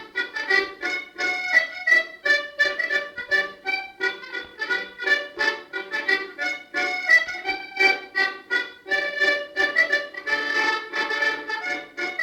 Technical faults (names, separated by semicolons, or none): none